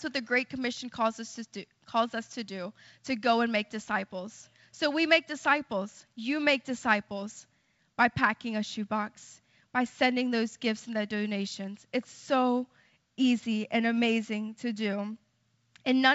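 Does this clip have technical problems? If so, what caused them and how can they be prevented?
No, the speech carries the bandwidth expected of G.722 wideband telephone coding at 64 kbit/s, with nothing that points to a problem in the signal chain.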